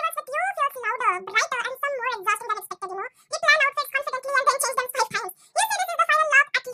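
Audio read two samples at a time (double speed), throughout: sample pairs taken as single frames, so the speech runs twice as fast and an octave higher.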